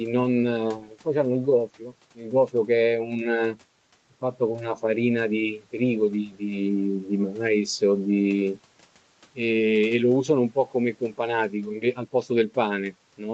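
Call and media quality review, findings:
No faults heard in the call audio.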